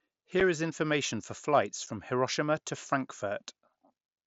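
At 0.4 s, right before "is information for flights", and again at 1.86 s, just after that phrase, there's unconcealed Bluetooth headset packet loss. One tiny chunk of speech, about 7.5 ms, fitting a single lost frame, drops out with no patching, leaving a brief hole with abrupt edges over the light grain of the mSBC headset link.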